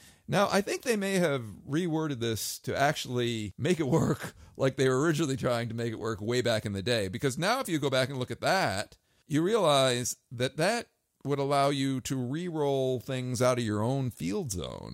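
At 8.14 s a single sharp snap sits on top of the speech, a brief, hard-edged tick that stands apart from the voice rather than belonging to it, peaking at a fairly low level of roughly -35 dBFS. This is an electrical switching spike: the likely source is a nearby switch, motor or static discharge arcing for an instant, with the audio line picking up that burst of interference as one click.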